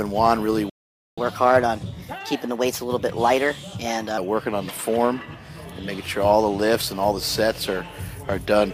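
At 0.70 s the player most likely ran short of buffered data or had its thread blocked, causing a playback stall: the sound cuts out mid-flow and stays silent for about 0.48 s, resuming at 1.18 s.

From 1.18 s to 4.18 s the player works through the accumulated backlog by resampling, a catch-up at higher speed. The audio runs at 1.15 times normal speed, pitched up by about two semitones, then drops back to its proper rate and pitch.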